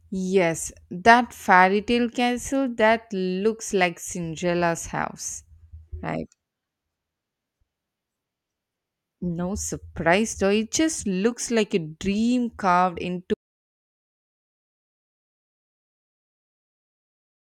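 An audio dropout to silence begins at 13.34 s, just after "like a dream carved", and runs to the end of the speech, about 4.2 s of dead air. The sound stops abruptly mid-flow and the gap holds silence, with no room tone or hiss underneath. This points to the input signal being lost while recording carried on writing silence, likely from a disconnected device, a failed link or an accidental mute, so whatever followed is gone.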